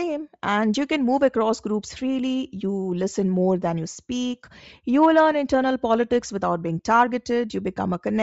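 Bluetooth LC3 compression runs throughout the speech, giving it a breathy, grainy edge with a noise-filled top end. The likely cause is an LC3 link at a low bitrate, where upper spectral bands are zeroed and filled with noise. This points to roughly 32 kbps with short 7.5 ms frames.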